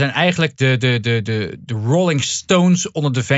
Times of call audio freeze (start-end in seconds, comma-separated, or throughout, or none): none